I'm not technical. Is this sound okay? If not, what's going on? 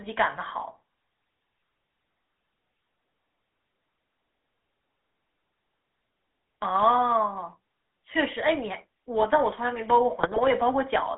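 No. The whole clip went through the GSM full-rate codec, the system early digital mobile phones used to squeeze speech down. Instead of sending the sound itself, it sends a rough description of the voice and rebuilds it with a simple pulsing signal. That leaves the speech with a constant buzzy, gravelly roughness, and the phone line keeps only a narrow band, from about 250 Hz up to 3.5 kHz, so it sounds thin and muffled.

Near the end, from about 10.19 to 10.40 seconds, there are GSM bit errors. The radio link garbled some of the transmitted data, so the decoder received wrong instructions for rebuilding the voice. For that brief moment the speech breaks up into squawks, pops and a gargling sound as the voice shape and loudness are reconstructed wrongly.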